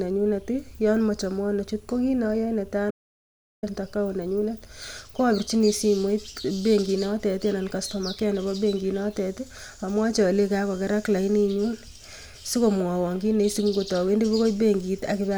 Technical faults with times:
2.91-3.63 audio dropout to silence

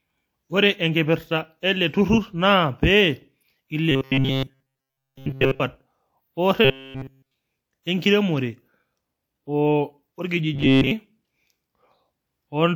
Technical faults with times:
0.00-12.76 transcoding between lossy codecs
3.91-5.61 robotic sound from repeated short buffers
6.65-7.34 robotic sound from repeated short buffers
10.54-10.91 robotic sound from repeated short buffers

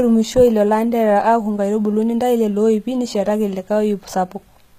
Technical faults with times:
0.00-4.78 HE-AAC compression

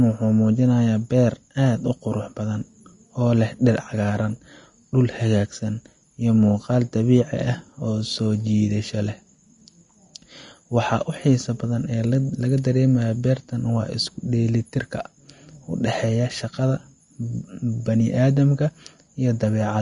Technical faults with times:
0.00-19.82 Vorbis compression

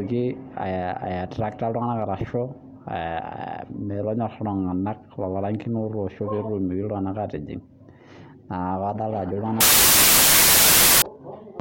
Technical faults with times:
9.61-11.02 wrong sample width

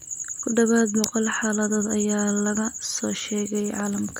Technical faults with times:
1.04 electrical switching spike

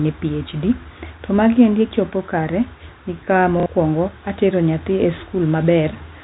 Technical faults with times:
3.60-3.66 packet loss with last packet repeated

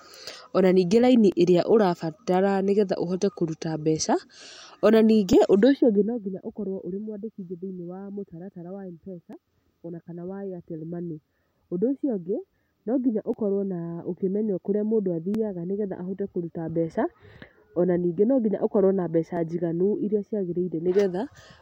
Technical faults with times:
1.32-21.38 clock drift buffer slips

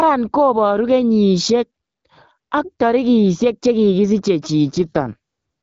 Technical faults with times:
4.73-5.17 AMR rate drop

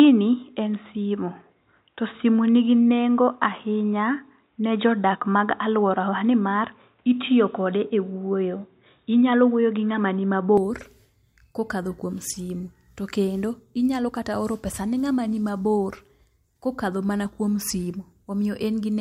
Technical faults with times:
0.00-10.57 input switched to a poorer device

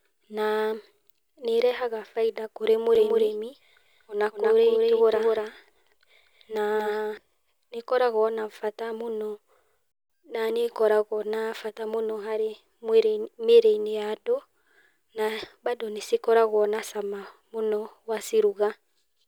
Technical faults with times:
2.95-7.17 doubled audio track

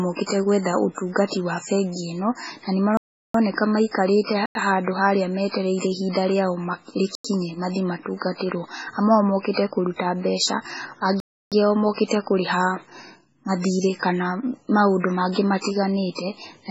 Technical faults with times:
0.00-16.70 MP3 compression
2.97-3.34 block of digital silence
4.46-4.55 block of digital silence
7.15-7.24 block of digital silence
11.20-11.52 block of digital silence

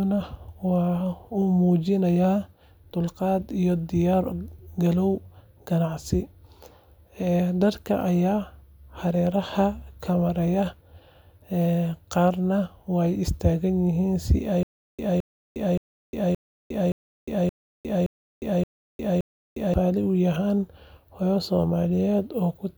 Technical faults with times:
14.63-19.74 stutter with silent gaps

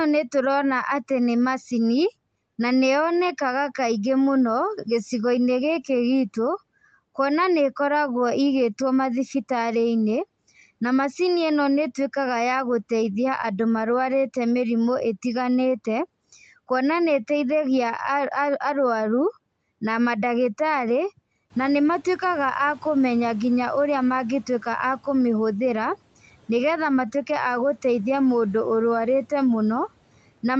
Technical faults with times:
21.50-22.19 noise suppressor catching up

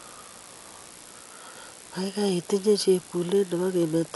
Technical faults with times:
0.00-4.16 computer activity noise
0.00-4.16 Dolby Digital compression

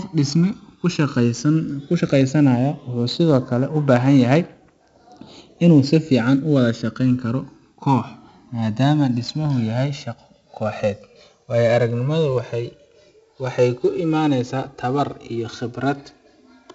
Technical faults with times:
0.00-16.75 channels drifting apart
0.00-16.75 4-bit ADPCM compression

